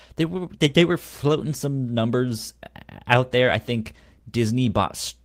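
At 1.51 s, between "they they were floating" and "some numbers out there", and again at 3.95 s, just after "out there I think", there's a lost packet rebuilt from error correction. Each 20 ms patch, which fits a single dropped packet, was filled from the next packet's low-bitrate backup copy, so there's no gap, just a brief rougher, noisier grain to the speech.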